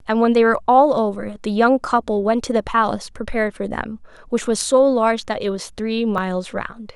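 At 6.18 s the capture software most likely fell behind and the hardware overwrote a buffer before it was read, a dropped buffer (overrun). About 20 ms of speech is missing and the two sides butt together, so the sound jumps ahead.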